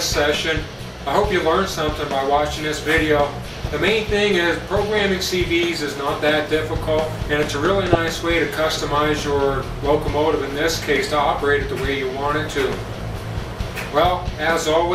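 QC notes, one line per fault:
3.59–3.73 s and 7.93–7.97 s, DAB burbling: brief noise blips as bit errors slip past error correction, so wrong samples put short bursts of noise in individual MP2 sub-bands. Spectrogram shows blocky bright patches confined to narrow bands; waveform shows small irregular bursts.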